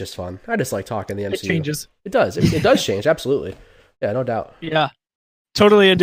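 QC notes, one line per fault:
throughout, imaging from linear upsampling: straight-line interpolation, which fits a 22 kHz source raised to 44.1 kHz, filtered weakly, dulling the top end and leaving a mirrored image from about 11 to 22 kHz, roughly 30 dB down, heard as faint metallic shimmer on sibilants.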